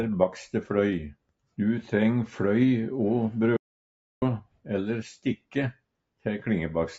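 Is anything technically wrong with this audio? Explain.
Yes. From 3.57 to 4.22 s there is an audio dropout to silence: about 0.65 s of pure silence with no room tone, likely from a lost input link, unlike a gradual fade.

Noise suppressor cuts appear at 4.42–4.69 s and 5.36–5.56 s, where the suppressor mistook sound for noise and pulled it down by about 19 and 18 dB. Unlike the dropout, the sound is thinned rather than erased. This happens on a call path limited to 8 kHz.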